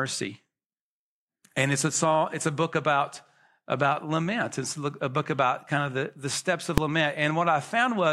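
A single sharp bang cuts through the speech at 6.78 s, lasting only about 1.45 ms, with no separate onset and release pops because the event is too short to split in two. This is invalid numbers at full scale: a processing calculation produced infinite or invalid values, which were clamped to the maximum positive or negative level for one brief block, a length that fits a 64-sample block, driving the output to one extreme value, far beyond the speech's peaks, for that instant.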